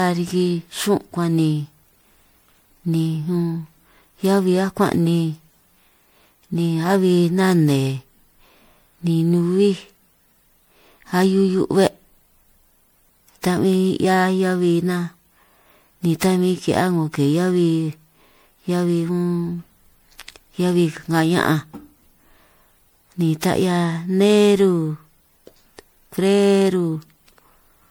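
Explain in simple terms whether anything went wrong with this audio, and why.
Something did go wrong: the speech has generation loss from start to finish. It sounds swirly and hollow, with a watery smear around the voice, and the starts of sounds are blurred rather than crisp. This is likely from the recording being squeezed by MP3-style compression and then re-squeezed, roughly half a dozen times or more. Each pass adds its own damage, and the damage piles up. A single round of heavy compression would sound thin or muffled, but not this layered and smeared.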